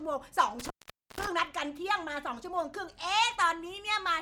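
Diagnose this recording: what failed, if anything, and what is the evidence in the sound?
An intermittent contact in the analogue wiring drops the speech between about 0.60 and 1.28 s. Within that span the signal path opens for roughly 480 ms, so the speech vanishes abruptly rather than fading. Crackle marks the moments where the connection breaks and remakes, and faint hiss sits in the gap while the line is open. That pattern points to a loose cable or plug whose contacts briefly separated, not to a digital dropout.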